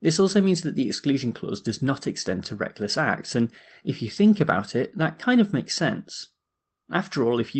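Speech clip, no technical faults.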